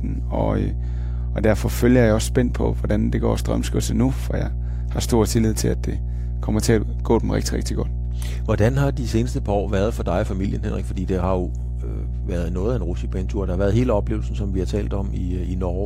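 A steady low 60 Hz drone with some low harmonics runs under the speech from start to finish, nearly as loud as the speech: mains hum from power-line coupling, such as a ground loop.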